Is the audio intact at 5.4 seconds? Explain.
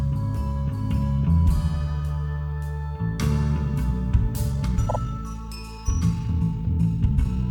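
No, 5.4 seconds falls inside a time-stretched section running from 4.45 s to 7.5 s, where the music suddenly rushes ahead at about 1.48 times its pace while its pitch holds steady. Software likely squeezed this part by dropping short fragments.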